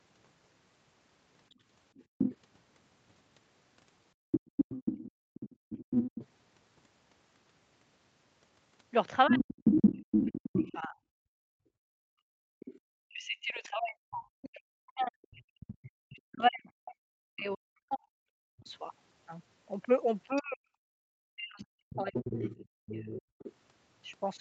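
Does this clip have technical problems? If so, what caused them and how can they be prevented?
Yes. Other side's voice leaking through, 1.5 to 12.8 s and 15.84 to 23.53 s: an echo canceller that likely missed part of the loudspeaker signal lets a second voice through, first about as loud as the talker, later well below.

Background gated by the echo canceller, 2.05 to 4.52 s and 11.27 to 12.6 s: the canceller clamped the microphone while the loudspeaker played. Room sound drops by up to about 36 to 40 dB, briefly at first and for over a second later.

Speech suppressed in double talk, 5.25 to 5.49 s and 9.28 to 23.14 s: with both sides talking, the canceller likely could not separate them and attenuated both. The talker dips deeply, and over most of the later stretch the voice is repeatedly cut away.

Prevent all three with a headset instead of a loudspeaker, or with a better-tuned echo canceller that adapts faster and keeps suppression gentler during double talk.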